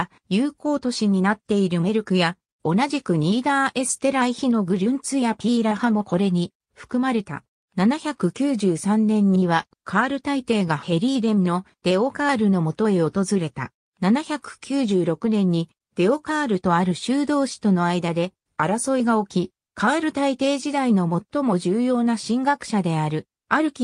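No technical faults can be heard anywhere in the recording; the signal holds steady and intact throughout.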